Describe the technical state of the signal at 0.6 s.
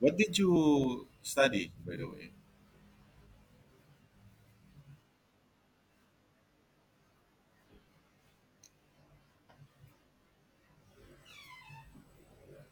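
Right around 0.56 s there are compressed frames skipped: a couple of frames never get decoded, so the speech jumps ahead by roughly 70 ms, which fits a 32 ms frame length.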